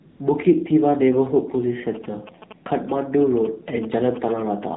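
A buzzy, synthetic speech sound with nothing above 4 kHz runs through the whole clip. This is the AMR narrowband mobile codec: the signal is carried at 8 kHz sampling, so the top half of the normal speech band is gone. The voice is rebuilt from a vocal-tract model fed by a handful of pulses per short sub-frame. The degree of buzziness points to one of the lower AMR-NB modes, about 7.4 kbps, where too few pulses are available to model the voice faithfully. Very early, from 0.10 to 0.20 s, the background briefly gives way to a smooth, even hiss that switches in and then out. That is AMR comfort noise: for about 100 ms the sending phone treated the sound as silence and stopped sending speech frames, and the receiving end filled the gap with generated noise built from a rough level-and-spectrum description rather than the real background. From 1.95 s to 4.65 s a galloping dit-dit-dit of short buzzes sits under the speech, at roughly 15 dB below it. 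These are GSM signalling bursts from a nearby 2G phone exchanging control traffic with the network. The audio circuitry rectifies its radio pulses, and their repetition at about 217 Hz gives the buzz its pitch.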